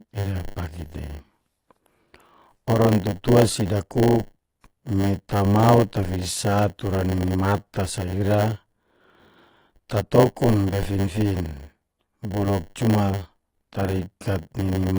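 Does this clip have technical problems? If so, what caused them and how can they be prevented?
Yes. Throughout the speech, the top end is cut off, and sibilants sound smeared and fizzy with a warbling texture. A spectrogram shows a hard ceiling with patchy holes below it. The likely cause is AAC compression at a low bitrate, around 32 kbps. Encoding at a higher bitrate prevents this.

A steady 100 Hz buzz runs through the whole clip, and the audio plays about 8% slow at roughly normal pitch. This is a block size mismatch (padded). Each short block is zero-filled to a longer size, and the waveform shows tiny gaps every 10 ms. Matching the buffer sizes between stages prevents this.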